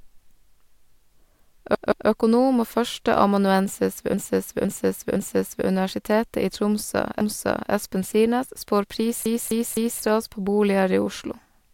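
The speech stutters four times, replaying a short stretch: at 1.75 to 2.09 s a 171 ms block plays twice more, at 4.14 to 5.67 s, just after "og førsteamanuensis ved", a 512 ms block plays three more times, at 7.21 to 7.72 s a 512 ms block plays once more, and at 9.26 to 10.03 s a 256 ms block plays three more times. These are repeated frames, where runs of compressed frames were delivered more than once and the decoder played them again. Each repeat lengthens the clip by the replayed time.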